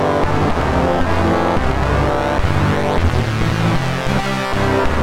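No technical faults can be heard in this clip.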